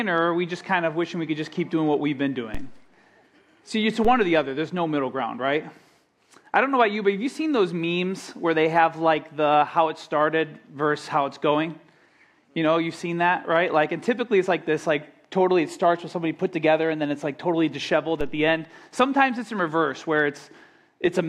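DC steps at 2.55, 4.05 and 18.21 s: the waveform's zero line jumps by about -20 dBFS, giving a low thump each time, then drains away through a 2 Hz high-pass.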